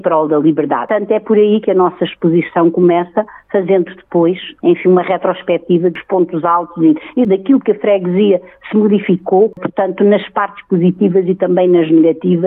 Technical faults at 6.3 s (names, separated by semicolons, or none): none